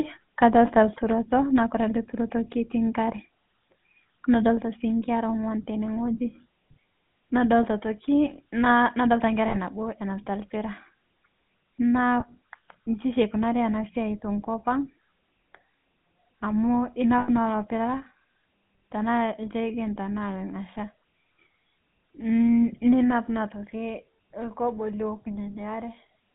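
Throughout, the GSM full-rate codec gives the speech a buzzy, gravelly roughness. On a spectrogram the energy is confined to roughly 150 Hz to 3.5 kHz, with nothing above.

At 1.02 s, just before "naa kore ale turoto", the level drops abruptly by about 4 dB. It drops again by about 2 dB at 4.59 s, before "sii nkera ongw'an tene", and by about 3 dB at 23.49 s. Each time the waveform envelope steps down and stays lower. This is likely the microphone volume being stepped down by the call software.

Lost GSM frames occur at 9.48 s (60 ms, right after "nna nadolita"), at 12.2 s (20 ms) and at 17.18 s (100 ms). Each gap is filled by repeating the last good frame, which sounds like a brief metallic ring. On a spectrogram these show as frozen, smeared harmonic bands.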